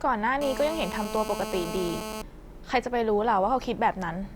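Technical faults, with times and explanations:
0.41 to 2.22 s, GSM phone buzz: a 2G handset close to the recording chain was transmitting in time-slotted bursts about 217 times a second, as it does during a call, and the audio circuitry rectified those radio pulses into the signal path. The result is a hard, raspy buzz at 217 Hz with a dense stack of harmonics, held steady for the whole stretch, sitting only about 8 dB below the speech and bearing no relation to it.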